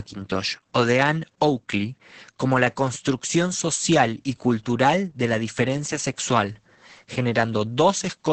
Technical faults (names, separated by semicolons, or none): Opus voice compression